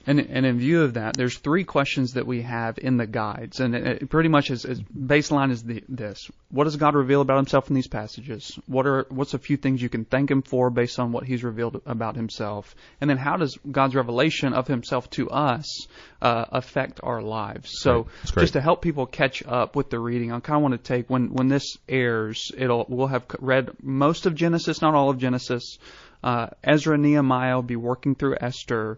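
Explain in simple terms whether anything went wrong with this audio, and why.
MP3 compression, heard across the whole speech clip: the sound is plainly watery and swirly, with the crisp top end missing and s sounds turning metallic. This is likely the result of saving the recording with too little data. The encoder throws away the highest frequencies entirely and drops quieter details, and those details flicker on and off from moment to moment, which is what makes the voice sound smeared and underwater.

An electrical switching spike lands at about 1.15 s, right after "in view of that" and just before "there's three questions that", and again at about 21.38 s, after "want to take when" and before "this airs it'll we'll". Each is a sharp snap laid on top of the speech, lasting only a millisecond or two. The likely cause is a nearby switch, motor or static discharge sparking briefly, with the recording line picking up that burst as a click.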